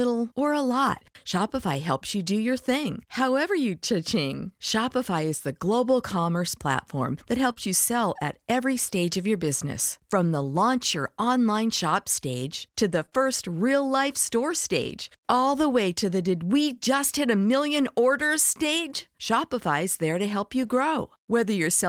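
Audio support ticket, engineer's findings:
Lost packet rebuilt from error correction: brief rough, grainy patches in the speech with no gap, at 2.83 to 2.85 s, 7.49 to 7.51 s, 13.02 to 13.04 s, 13.13 to 13.19 s, 14.39 to 14.41 s and 20.63 to 20.69 s. Most are 20 ms long, which fits single lost packets. The 13.13 and 20.63 s patches run 40 ms, so probably two packets. The Opus decoder played the low-bitrate copies carried in the next packet (in-band FEC). That's why they sound coarser and noisier.

Short concealed packet loss: quick smears at 7.53 to 7.58 s and at 13.06 to 13.13 s. The second one is two back-to-back holes, split at 13.09 s. Each hole points to a 20 ms packet that arrived too late. There was no FEC copy for these, so the decoder's packet loss concealment extrapolated from the preceding audio for about 22, 18 and 14 ms before crossfading back. The 13 s cluster runs straight into the FEC patch, so it's the messiest spot.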